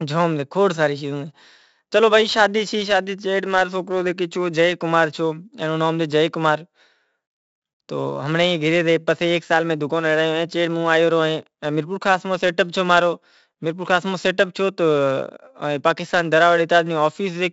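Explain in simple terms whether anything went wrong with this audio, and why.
The whole recording has been through 4-bit ADPCM compression. Each sample is stored as a small guessed step, so heavy, grainy hiss rides on every loud stretch of speech and rough edges mark sudden sounds. Nothing above about 7.7 kHz survives, which dulls the sound.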